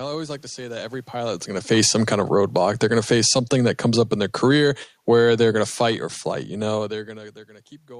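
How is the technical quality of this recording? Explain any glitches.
The recording has one technical fault, a slow drop in level caused by the gain control.

Automatic gain falling, from 1.13 s to 6.09 s: the automatic gain control judged the input too loud or its background noise too strong and reduced its gain, about 12 dB in total. The speech sinks over those five seconds, and the room noise sinks with it. That shared fall is what separates it from the talker's own shifts in distance around 1 s and 6.5 s, which change only the voice.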